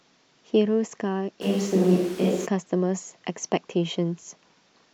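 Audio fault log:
1.43 to 2.45 s, switch to a distant microphone: The speech turns roomy and hollow at once and loses its low end. Room noise rises to about 20 dB below the speech. The overall level barely changes. The change in and back out is abrupt, with no fade. The likely cause is that the close microphone dropped out and a far one took over. A far microphone hears more room reflection and ambience and less of the body's proximity bass.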